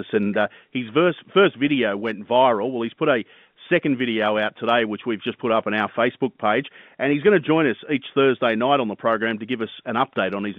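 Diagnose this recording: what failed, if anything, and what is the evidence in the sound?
Nothing failed in this recording.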